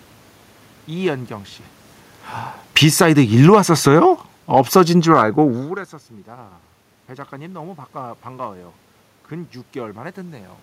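From 2.61 s to 6.28 s the speech and the room noise behind it sink together by about 9 dB. That joint fade marks automatic gain falling: the gain control judged the input too loud, or its background noise too strong, and eased its gain down, unlike the talker's own movements near 1.5 s and 5.5 s.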